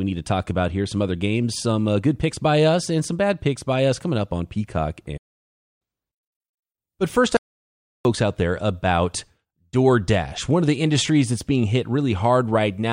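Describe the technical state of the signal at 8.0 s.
At 8.0 s the signal is in the final moments of an audio dropout to silence that runs from 7.37 s to 8.05 s, about 0.68 s in all. The speech stops abruptly mid-flow and returns just as suddenly, and whatever was said in between is lost. The input was likely interrupted while the recorder kept writing silence. Unlike a natural pause or a noise gate closing, the gap is silent with no room tone beneath it.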